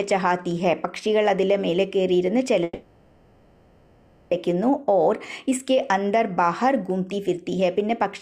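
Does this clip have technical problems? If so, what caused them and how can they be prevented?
Yes. From 2.63 to 4.33 s the sound stalls, and its last moment is stretched into a fading buzz for about 1.7 s. It then resumes exactly where it stopped, with nothing lost. This is a call audio freeze, likely caused by delayed packets draining the jitter buffer, which leaves everything afterwards 1.68 s late. A steadier network path with call traffic prioritised, plus a jitter buffer able to grow to absorb such delays, would prevent it.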